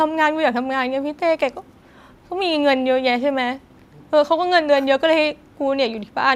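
Listening to this speech recording, nothing stood out as a technical problem at any point.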